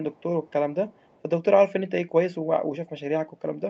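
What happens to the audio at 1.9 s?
Nothing goes wrong at 1.9 s: the speech continues intact through that moment, with only the normal character of the call path it travelled over.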